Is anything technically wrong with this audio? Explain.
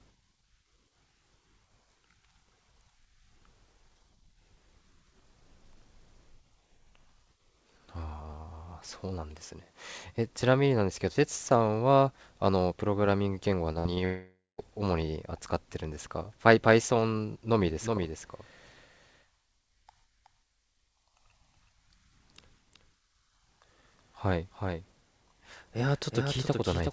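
Yes, there are two separate problems: a cluster of network losses around 14 seconds, and a doubled track over the last stretch.

Short concealed packet loss hits twice, at 13.72 to 13.79 s and again at 13.95 to 13.99 s. Each time about 20 ms of the stream didn't reach the decoder in time. The receiver patched the hole by extending the sound just before it and then cross-faded back into the real signal. You hear a quick smear or wobble, and the first one also loses a sliver of the original.

A burst of packet loss sits right between those, from 13.79 to 13.87 s. Around 60 ms went missing in one go, which points to a few consecutive packets dropping. The concealment carries the last sound forward and turns it down as the gap runs on, so you get a short held buzz or fading hiss. The audio then picks up further along, with that bit gone.

Then comes a long network dropout from 14.05 to 14.60 s, about half a second. 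Nothing arrived over that span, most likely a brief connection stall. The receiver stretches the last sound into a decaying buzz or hiss, and that fades into near silence before the audio comes back later on. Whatever was in that half second is simply missing.

Finally, from 17.66 s to the end there's a doubled audio track. A second full-band copy of the same audio runs roughly four tenths of a second behind the original and about 5 dB quieter. It has no reverb tail or room colour, and it cuts in abruptly. That points to a likely second capture path, or an edit that left two copies out of step. It reads as a dry, hard echo. The G.722 call path's 8 kHz top end can be heard under all of this.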